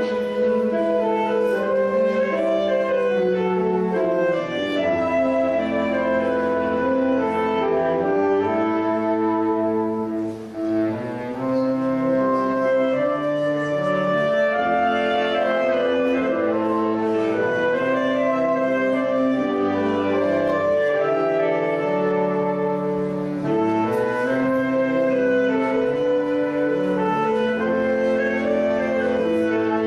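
No technical faults can be heard anywhere in this recording.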